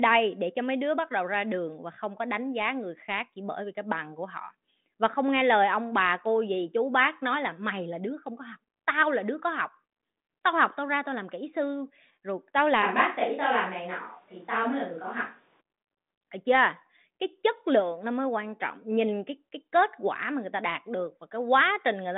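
Right after "kỹ sư rồi tao", at 12.84 s, the speech suddenly goes roomy and hollow and loses its low end, then snaps back at 15.59 s. That's the classic sound of a switch to a distant microphone, most likely the close mic dropping out so the recording fell back on one further off. The level barely moves, and there's a faint room noise underneath, roughly 35 dB below the speech, all inside the usual narrow telephone band of the G.726 line.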